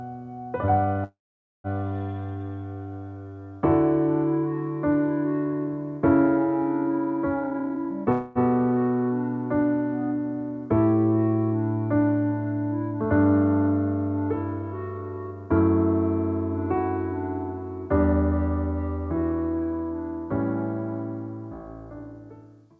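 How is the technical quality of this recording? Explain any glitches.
The recording has three timing glitches: two freezes and one burst of accelerated playback. It passes through a wideband call codec, likely G.722, so nothing is present above 8 kHz.

Call audio freeze, 1.04 to 1.67 s and 8.12 to 8.38 s: the sound stalls and the last fragment is stretched into a fading buzz. In the first freeze this decays to about 0.5 s of silence. The second lasts about 0.23 s and never goes quiet. Each is likely a jitter buffer running dry while packets were delayed. Playback then resumes where it stopped, so nothing is lost but the audio falls 0.6 s and 0.23 s further behind. On a spectrogram, each freeze shows smeared horizontal streaks, and in the first they end in a blank block.

Jitter buffer speed-up, 7.34 to 8.06 s: the audio runs at about 150% speed with its pitch unchanged, sounding hurried. 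The receiver had built up a backlog and cut short pitch-period slices repeatedly, trimming roughly 0.4 s. In the waveform, the periodic cycles are packed closer together with tiny seams. On the spectrogram, events are compressed in time while the harmonic spacing stays the same. The second freeze follows almost immediately after this speed-up.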